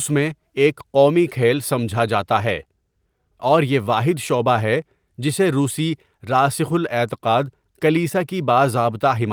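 Speech, with no audible technical faults anywhere in the recording.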